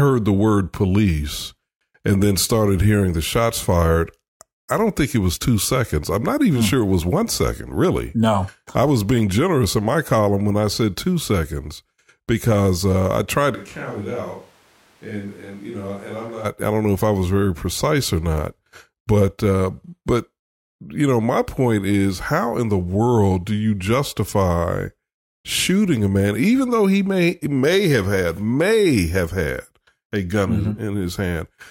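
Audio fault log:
13.56–16.44 s, switch to a distant microphone: right after "because uh I tried" the sound jumps to roomy and hollow, with thinner bass, roughly 10 dB quieter and room noise only about 25 dB down, likely the close mic dropping out, snapping back by "I don't know if".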